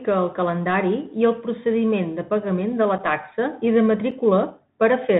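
From start to finish the speech carries the Bluetooth CVSD headset codec's damage, plainly audible and consistent with a 64 kbps link. Each sample is coded as a single up-or-down step, so s sounds turn scratchy and loud high passages distort. A granular hiss lies underneath, and a spectrogram shows an empty band above 4 kHz.

Unconcealed Bluetooth headset packet loss hits at 2.98 to 3.01 s and again at 4.11 s. Each gap is about 7.5 ms, likely a single dropped packet with nothing filled in. The waveform shows a flat notch with sharp edges, and a spectrogram shows a thin vertical break. After each gap the speech resumes quieter for a moment.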